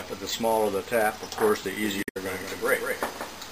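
At 1.83 s a second copy of the whole sound cuts in abruptly, trailing the original by around a fifth of a second and sitting roughly 5 dB below it. It stays there to the end. This is a doubled audio track. The copy is full-band and dry, with no decay or room colour, so it isn't an echo. The likely cause is the same signal arriving a second time through a slower path, or an edit leaving two copies stacked out of step.

Just after that, from 2.0 to 2.17 s, there's a short glitch. That's damaged data in a compressed stream. Some of the bytes in that stretch were lost or corrupted, so the decoder misread the frames there, lost sync, and had to hunt for the next valid frame header before it could carry on. The glitch comes from that resync.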